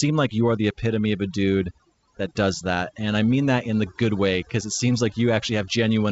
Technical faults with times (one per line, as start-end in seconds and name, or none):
0.00-6.11 overdone noise removal